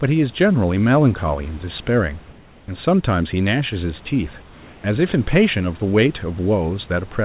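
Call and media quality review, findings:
Comfort noise in place of the background at 2.32–2.68 s and 4.42–4.84 s: likely discontinuous transmission halting the sender in pauses while the receiver synthesises fill noise. The room ambience turns flat and featureless, about 1 dB and 2 dB quieter.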